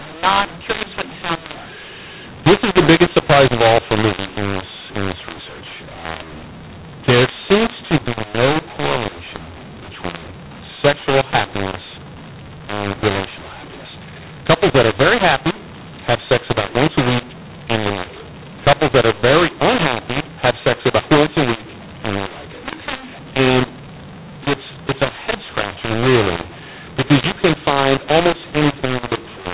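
From start to finish the speech carries a mu-law and A-law mix-up: telephone audio written as A-law is read back as mu-law, so sample levels are scrambled, making it harsh and distorted. Unlike plain clipping, even pauses fill with hiss, as near-silent samples are lifted.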